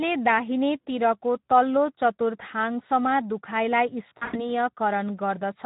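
Speex codec coding runs through the whole clip, from start to finish. Speex models speech as a filter driven by a coded excitation, and at this low rate the excitation gets few bits, so its damage is plainly audible: the speech sounds rough and hoarse, with a grainy, noisy texture over every syllable. The degree of damage fits a rate of around 11 kbps, in the low-to-middle range where this coarseness becomes obvious.

VoIP packet loss concealed by the speech codec follows from 4.09 to 4.50 s. About 160 ms of audio went missing, scattered across a 240 ms stretch. The pattern points to roughly eight lost frames, with the longest unbroken gap at 100 ms. During each gap the decoder kept repeating its last pitch and filter while lowering the gain, so the speech smears into a buzzy tone or a coloured noise that fades. Because each rebuilt frame depends on the one before, the speech stays weak and distorted briefly after packets resume.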